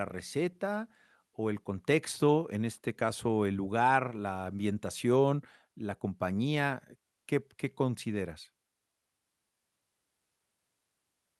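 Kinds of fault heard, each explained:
No kinds of fault are heard in this speech clip.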